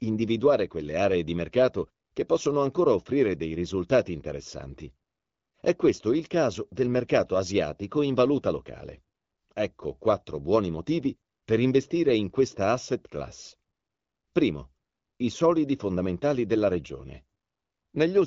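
The speech has no technical faults, and its band-limited, lightly coded character is consistent with an AMR wideband (HD Voice) link running at a mid-range rate where speech stays clear.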